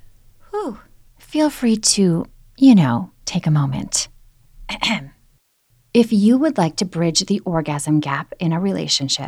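Speech recording, with no technical fault audible anywhere in it. There are no times or causes to report.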